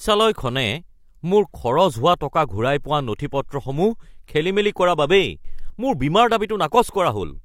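Adaptive stream at a lower bitrate, from 3.20 to 5.20 s: the speech abruptly takes on a swirly, artefact-laden sheen with no gap at either edge, which fits a stream dropping from around 96 kbit/s AAC to a 32 kbit/s HE-AAC rendition while the connection slowed.

Sudden gain jump, from 5.45 to 5.70 s: speech and background noise leap up together by about 12 dB in a single step with no fade, then drop back at 5.70 s. The likely cause is a digital gain setting applied without a ramp.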